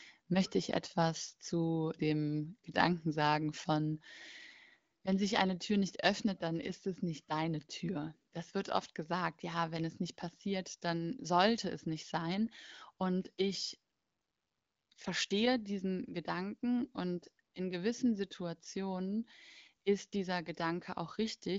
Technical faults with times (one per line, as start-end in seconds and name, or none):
none